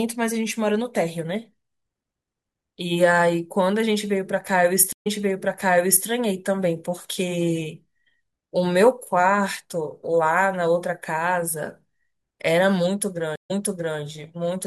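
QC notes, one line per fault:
4.93–6.06 s and 13.36–13.99 s, stream reconnect: the audio drops out for 131 ms and then 141 ms while the connection is re-established. A fresh decoder restarts mid-stream, so each resumption opens with a brief mute or fade-in. Playback resumes earlier than where it broke off, by about 1.0 s and then 0.49 s, so a stretch of speech is heard twice. The repeat after the gap points to the server resending a burst, and sets this apart from a plain dropout or buffer underrun.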